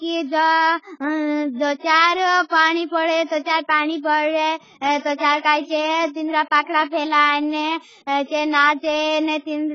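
From start to finish the speech sounds dull and smeared, with a warbling, fizzy texture on sibilants and held vowels, likely from AAC compression at a rate that fits a stream of around 16 kbps. With so few bits, the coder dropped everything above 7.6 kHz. On a spectrogram that shows as a hard ceiling at 7.6 kHz.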